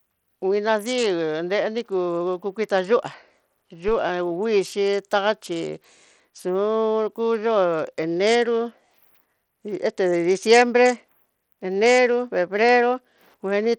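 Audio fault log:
Throughout: Bluetooth SBC compression. The speech has a gritty, grainy texture with the treble thinning out and flickering in and out, and aliasing rides on the speech. This is likely the Bluetooth SBC codec at a tight bit allocation, consistent with roughly 80 kbps: the top sub-bands are starved of bits and drop out from moment to moment, while the remaining bands are coarsely quantised, leaving audible grain and aliasing.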